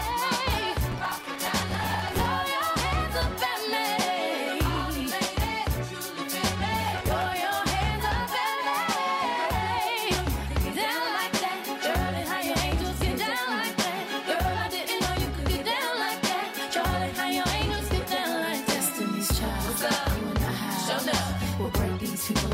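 Processor overload crackle appears twice, from 0.92 to 2.26 s and again from 6.88 to 7.26 s. The processor falls behind on its short buffers, each around 5 ms, and misses many deadlines in a row. Each miss replays stale audio with hard edges, producing a gritty tearing that rides on the sound. Unlike a single dropout or click, it is a dense cluster that stops abruptly once the load clears.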